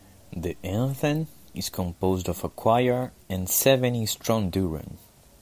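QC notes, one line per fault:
No faults heard.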